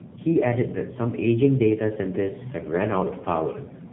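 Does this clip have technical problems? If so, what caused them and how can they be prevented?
Yes. Tandem speech coding runs throughout: two low-rate speech codecs in sequence, consistent with iLBC then AMR-NB with a G.711 hop between, each re-encoding the previous coder's errors. The audio sounds rough, muffled and warbly, with nothing above 3.8 kHz. Preventing it means keeping one codec end to end, using transcoder-free operation or a wideband codec negotiated across the links.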